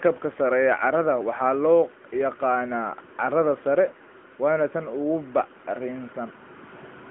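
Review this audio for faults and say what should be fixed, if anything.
The speech has been carried through an AMR narrowband mobile codec for the full length of the clip, the 8 kHz-sampled coder used on 2G and 3G calls. It rebuilds the voice from a vocal-tract model excited by a few pulses per short subframe, and the plainly audible damage fits a mid-range mode of about 10 kbps. The result is a buzzy, synthetic tone confined to a telephone band of roughly 200 Hz to 3.4 kHz, with nothing above 3.8 kHz. To prevent it, record or route the audio over a wideband path, such as a direct capture or a wideband codec, rather than a narrowband mobile call.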